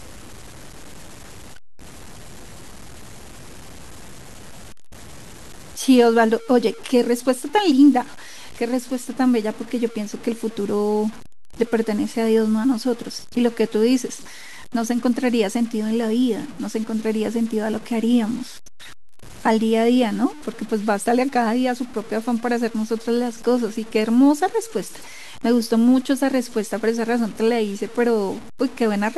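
Throughout the speech, the samples were likely cut down to very few bits by truncation with no dither. The error level, about 25 dB below the signal, points to roughly 6-bit samples. Because the rounding error tracks the waveform, it is heard as grainy, rasping low bit depth distortion that shifts with each sound. Quieter passages turn gritty, and the softest moments sputter or drop to silence.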